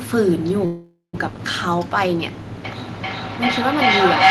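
At 0.65 s the speech stalls into a half-second call audio freeze, likely from packets held up so the jitter buffer ran dry. The last sound smears into a fading buzz, about 130 ms of it near-silent, then talk resumes at 1.15 s with nothing lost, just shifted about 480 ms later.

From 2.65 s to the end there's a feedback howl: two devices on the call in one room, with the loop gaining level each pass. It narrows to a tone around 700 Hz, pulsing roughly every 0.4 s, and peaks about 11 dB above the speech.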